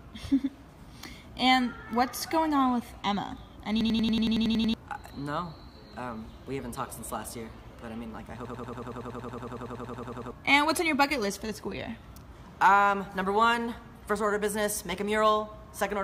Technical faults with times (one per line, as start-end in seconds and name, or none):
3.81-4.74 system hang loop
8.45-10.31 system hang loop